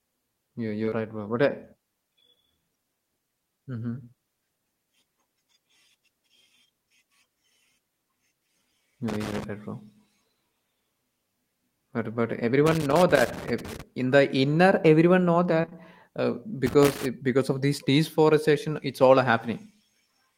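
A speech recording with two kinds of fault. Short concealed packet loss occurs at 0.85 to 0.94 s and again at 15.62 to 15.73 s: back-to-back gaps of about 20 ms each that the receiver patched by extending the preceding sound, leaving a brief smear or wobble before it blends back into the real signal. Loose connector crackle appears as irregular scratchy bursts at 9.08 to 9.44 s, 12.66 to 13.82 s and 16.66 to 17.06 s, where a poor contact repeatedly breaks and remakes the signal path, chopping the audio into crackle.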